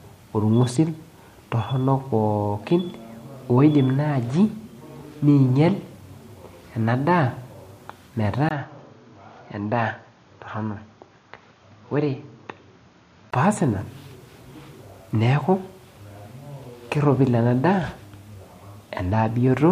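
At 8.49 s, just before "peas ina", the speech briefly drops out for about 20 ms, then comes back duller, capped near 6.8 kHz, about 5 dB quieter and over a new noise floor roughly 35 dB down. That's likely an input switched to a poorer device, holding until 13.33 s.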